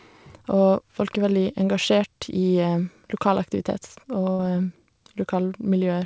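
A burst of packet loss hits this speech clip at 4.32 to 4.40 s: about 70 ms of audio never arrived, so the receiver stretched the last sound into a fading fill before picking up further on, skipping that stretch. Like the rest of the call-path audio, it has nothing above 8 kHz.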